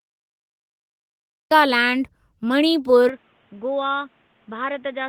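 Cut-off start, 0 to 1.51 s: the recording began late, so the clip opens with digital silence, and at 1.51 s the speech bursts in mid-sound with no natural onset or fade, as if the capture caught it already underway.

Input switched to a poorer device, from 3.09 s to the end: with no gap, the sound abruptly turns dull and boxy, with nothing above 3.8 kHz. The level falls by roughly 10 dB, and a new noise floor appears about 35 dB below the speech. This likely comes from the system changing to a narrower-band microphone or a headset call profile partway through the recording.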